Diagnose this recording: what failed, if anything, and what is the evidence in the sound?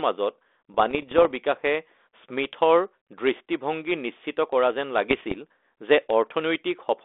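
The failure is bit errors on an ADPCM link, in the transmission path after the codec, heard as pops and rough, gritty bursts with brief level jumps in the speech from 0.74 to 1.32 s and from 5.10 to 5.38 s. Flipped bits corrupt the decoder's adaptive step size and predictor, so each error smears on for milliseconds rather than clicking once. The density suggests an error rate of a fraction of a percent, on a narrowband 300 Hz to 3.6 kHz line consistent with 32 kbit/s G.726.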